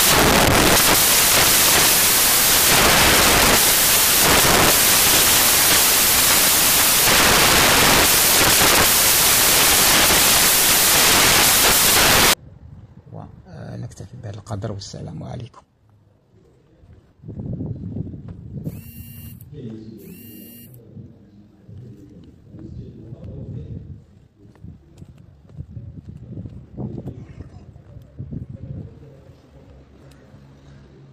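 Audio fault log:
0.00–12.33 s: samples built from the wrong bytes. The sample bytes are combined in the wrong order or alignment, so the rapidly changing low bits dominate and the sound becomes loud, broadband white noise. It shows on a spectrogram as a flat full-band wash and on a waveform as a dense, near-full-scale block that thins only where the original is almost silent.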